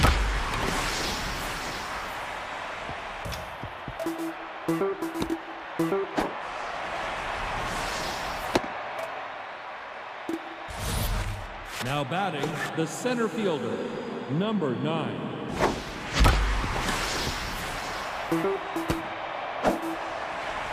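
Nothing in the audio stood out as a technical problem on listening.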